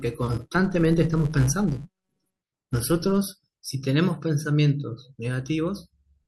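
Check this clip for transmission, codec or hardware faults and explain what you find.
One fault is present: a filter restarted on every block, from 0.0 s to about 3.18 s. Some processing filter loses its memory at each block boundary and starts again from silence, so every block opens with a small transient. These repeat at about 188 Hz, which fits 256-sample blocks at 48 kHz. The result is a buzzy tick train that rises and falls with the speech level and then stops. Mains hum, by contrast, stays steady whatever the signal does.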